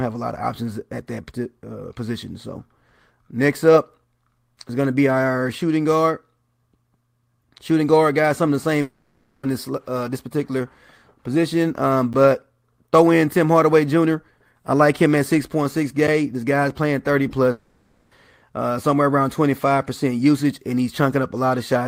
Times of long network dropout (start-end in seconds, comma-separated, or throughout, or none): 8.81-9.45, 17.51-18.13